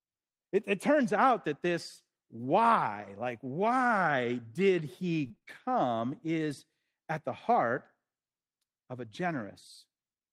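From 5.23 to 5.49 s the speech breaks up with repeated packet loss (robotic sound). Five short holes fall within this quarter-second, the longest 31 ms, and each is papered over by extending the preceding sound, so concealment covers 38% of the span. The repeated stretching gives a choppy, robotic texture with fragments of speech missing, and around 40 ms of the lost material is only roughly rebuilt.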